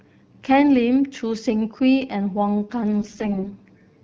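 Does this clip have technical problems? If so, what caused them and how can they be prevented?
Yes. From 3.00 to 3.48 s, AMR bit errors corrupted the less protected bits of roughly two dozen speech frames, about one bit in ten, while the frames still passed their checksum. Misplaced excitation pulses and wrong pitch, gain and spectral values make the speech turn hoarse, scratchy and gargly at the same pitch and loudness. Stronger channel coding or a more robust codec mode on weak links would prevent it.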